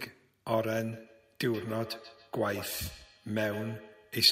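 From 0.92 s to the end at 4.31 s, the speech comes back at a fixed interval of roughly 150 ms, as feedback echo between two devices. The loudest return sits about 14 dB below the speech. A second device in the room is replaying this microphone's audio, and the local echo canceller cannot remove sound it did not play. Unlike room reverberation, this is a distinct delayed copy that sounds thinner and more ringing.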